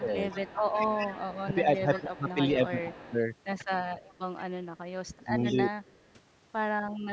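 An echo canceller that likely could not tell its own talker from loudspeaker echo produces speech suppressed in double talk at 0.0 to 0.15 s, dipping about 15 dB. From 0.3 to 2.34 s an echo leak, likely from a speakerphone canceller letting its microphone pickup through, returns a faint copy of the voice 161 ms late, about 15 dB down. Suppression returns from 1.44 to 2.97 s, pulling the voice down in patches. The leaked echo reappears fainter at 2.97 to 3.17 s. A deeper dip, about 25 dB, comes at 3.69 to 3.94 s. Further echo follows at 4.06 to 4.4 s and 5.06 to 5.54 s. The last suppression, from 5.25 to 6.03 s, cuts the voice by as much as about 30 dB.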